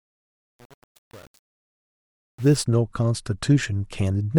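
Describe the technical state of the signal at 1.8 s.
At 1.8 s the speech is inside a fade affected by truncation distortion, from 0.0 to 2.63 s. Without dither, the quiet waveform snaps to coarse square steps, which fits about 7 bits, and sounds gritty. The waveform looks staircased, and a spectrogram shows broadband hash.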